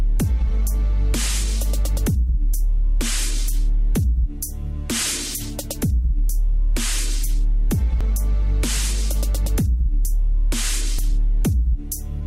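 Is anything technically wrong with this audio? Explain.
Yes. There is audio missing between chunks, heard twice, at 8.01 s and 10.99 s. At each point the sound jumps forward abruptly, with no silence in the gap. Roughly 20 ms is lost each time. The two skips are about 3 s apart. The likely cause is a recorder or processor working in 3.0 s chunks. It drops a short piece while closing one chunk and opening the next. The two sides are then joined directly.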